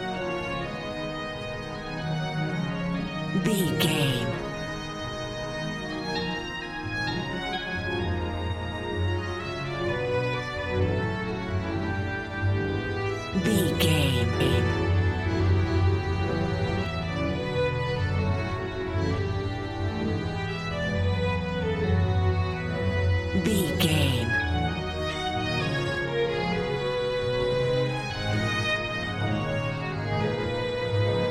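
From 14.40 to 16.86 s, a doubled audio track appears. A second full-band copy trails the original by roughly 0.4 s, at about equal loudness. It has no decay or room colour. It cuts in and out abruptly, likely from a slower second capture path.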